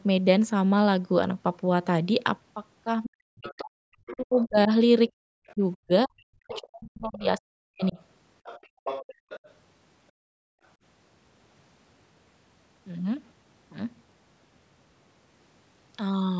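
Speech from a call, band-limited to nothing above 8 kHz by the call's normal microphone processing, with echo-canceller trouble concentrated between 3.05 s and 10.62 s. From 3.05 s to 7.98 s the talker's speech repeatedly sinks, at worst by something like 40 dB, over roughly three seconds in total. This is most likely speech suppressed in double talk: the canceller, unable to tell the near talker from loudspeaker echo, pulled everything down. What sets it apart from plain dropouts is that the dips coincide with another voice being present. That other voice is the other side's voice leaking through. It appears from 3.43 s to 4.46 s around 20 dB under the talker, briefly at 5.47 s to 5.54 s much fainter at about 30 dB down, and from 6.53 s to 9.54 s strongest at around 15 dB down. This is likely residual echo the canceller failed to subtract. It is distinguishable from crosstalk or a second person in the room by its overlap with the suppression episodes. 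Separately, the room background itself drops out as background gated by the echo canceller, from 5.11 s to 5.23 s by about 40 dB and across 8.67 s to 10.62 s by about 36 dB for around 0.7 s in total. Unlike the double-talk suppression, these are hard mutes of the ambience rather than of the talker, and the background snaps back once the canceller releases.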